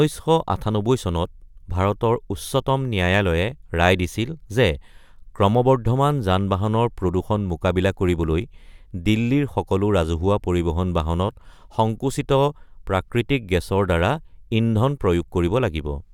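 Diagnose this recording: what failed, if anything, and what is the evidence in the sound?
Nothing in the recording points to a failure at any stage between capture and playback. There is no audible event to place in time or trace to a mechanism, so there is nothing to diagnose.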